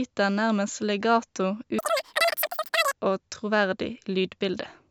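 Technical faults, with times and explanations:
1.79 to 2.93 s, wrong sample rate. For this stretch the speech jumps up sharply in pitch and rushes by at three times its normal pace. Samples captured at 16 kHz are being played out at 48 kHz with no conversion. Each second of sound is squeezed into a third of a second. Pitch rises by the same ratio, about 19 semitones. That is roughly an octave and a half. Voices come out thin, chirpy and hard to follow.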